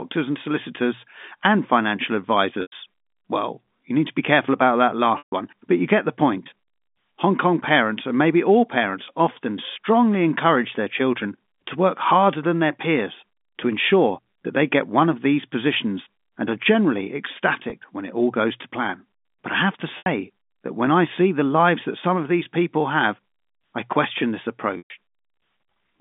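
Packet loss with pitch repetition interrupts this speech recording five times: at 2.62 s after "and solicitors and financial" (100 ms), at 5.18 s (140 ms), at 17.70 s between "positions and are generally" and "when it all goes" (20 ms), at 19.98 s between "I have to" and "that when I see" (80 ms), and at 24.78 s (120 ms). The gap lengths fit lost 20 ms packets. The receiver fills each gap by repeating the last pitch period, which sounds like a brief held buzz that fades out, all carried over the narrowband G.711 telephone line.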